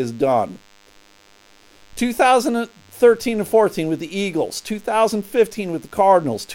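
DECT cordless phone buzz runs through the whole speech clip: a nearby DECT handset or base fires a radio burst every 10 ms, and the audio circuitry rectifies it into a thin, steady 100 Hz buzz rich in harmonics, sitting well below the speech.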